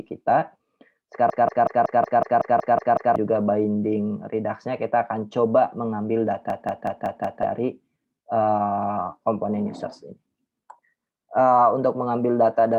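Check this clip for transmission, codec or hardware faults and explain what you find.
There's a system hang loop, twice: 1.30 to 3.16 s and 6.50 to 7.43 s. The machine stalled while the hardware kept replaying one 186 ms buffer (which fits 8192 samples), giving a machine-gun stutter at 5.4 Hz and dropping roughly two seconds, then one.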